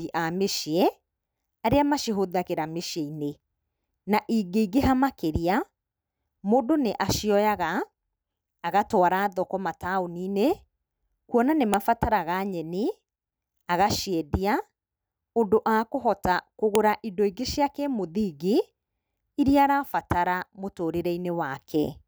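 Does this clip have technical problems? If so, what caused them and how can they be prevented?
Yes, there are two sharp clicks in this speech, at 11.74 s just after "kuona nĩ" and again at 16.75 s. That's a file header played as audio: pieces were joined without stripping their WAV headers, so those header bytes came out as a loud snap. To prevent it, strip each header before concatenating or streaming.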